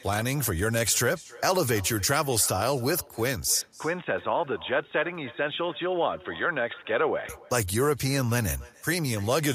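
From the very start and all the way through, the speech has a faint shadow trailing it by roughly a third of a second, sitting about 22 dB below the direct sound. That's echo with no canceller: the far end is playing the call out of a loudspeaker, its microphone catches it, and nothing strips it out, so your own speech returns after the network round trip as a thin, quieter copy.

Then at 3.61 s the tone changes abruptly, with no gap at the changeover. The band narrows, so the speech goes dull and boxy, drops a few dB in level, and picks up a faint new background noise sitting far below it. It stays like that until 7.29 s, when the brightness comes back. That pattern is most likely the input switched to a poorer device, such as a headset's call profile, for those few seconds.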